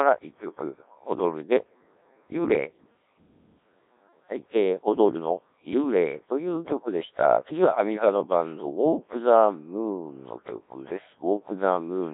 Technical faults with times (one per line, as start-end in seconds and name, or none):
0.00-12.13 Codec 2 vocoder